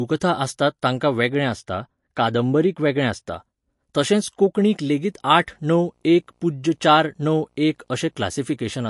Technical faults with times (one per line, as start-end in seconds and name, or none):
0.00-8.89 MP3 compression
1.28-3.28 de-emphasis applied wrongly
4.86-8.74 video or display buzz